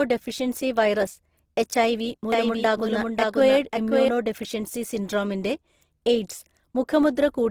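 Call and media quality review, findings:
Opus compression, whole clip: speech sounds grainy, rough and noisy, with clear codec damage. Likely cause is Opus in its music mode at a low bitrate, consistent with about 16 kbps. Bands stay filled with folded or noise energy instead of being left empty. Spectrogram: full band up to about 20.4 kHz, smeared, speckled texture in the highs, few holes.

Doubled audio track, 2.32–4.08 s: a second full-band copy of the speech trails about half a second behind, about 5 dB quieter, dry, with no room colour. Likely cause is a second capture path or an out-of-step edit. Waveform: a duplicate envelope offset by about 0.5 s that starts and stops abruptly. Spectrogram: repeated formant patterns shifted in time.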